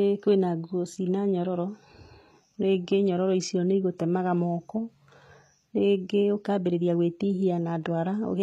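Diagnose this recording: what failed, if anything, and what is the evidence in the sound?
The codec stage is the weak point: the speech was likely passed through HE-AAC compression, and the damage is plainly audible for the whole clip. The encoder keeps only the lower spectrum and synthesises the treble by copying lower bands upward under a coarse envelope, so s sounds come out gritty and metallic, their harmonics mismatched across the crossover. Nothing survives above 14.9 kHz, and the coarseness fits a bitrate around 20 kbps.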